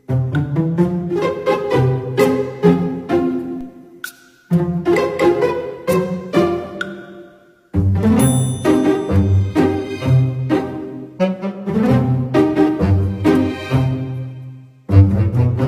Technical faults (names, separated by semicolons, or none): DC step